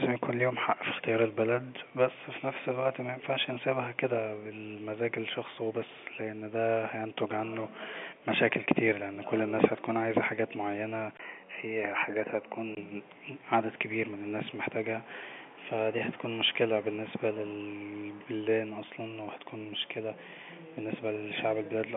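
At 11.17 s, right after "هتكون عايزة حاجة معينة", the speech briefly turns duller and boxier until 12.77 s, most likely because the input switched to a poorer device. A 20 ms gap marks the switch, visible as a short flat line in the waveform. The spectrogram's upper band then ends at 3 kHz, below the 3.8 kHz the telephone line otherwise carries, and a faint new noise floor sits far beneath the speech. Loudness barely changes.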